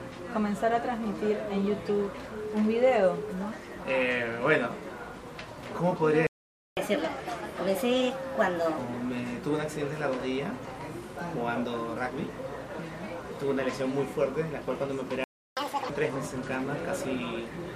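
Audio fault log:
6.27 to 6.77 s, playback stall: the sound stops for about 0.5 s, then resumes where it left off. No material is lost, unlike a dropout. Likely the player's buffer ran dry.
6.77 to 8.78 s, catch-up at higher speed: the backlog plays at 1.25 times speed, about four semitones sharp, then snaps back to normal. It is temporary and follows the gap, unlike a sample-rate mismatch.
15.24 to 15.57 s, playback stall: a silence of about 0.33 s cuts in mid-flow, then the sound continues from the same point. The likely cause is again the output starving or being blocked briefly.
15.57 to 15.90 s, catch-up at higher speed: a short burst at double speed, roughly ten semitones higher and chipmunk-like, recovers the lost time quickly before normal pitch returns.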